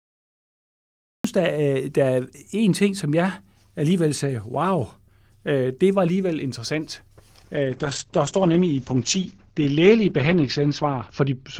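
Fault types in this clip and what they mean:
Cut-off start: Digital silence until 1.24 s, then the speech begins abruptly mid-sound at "der er der er", because the recording started late.
Call bitrate drop: From 7.58 s, after "det var alligevel interessant", speech turns rough and muffled with nothing above 8 kHz, which fits the encoder falling from 40 to 9 kbps.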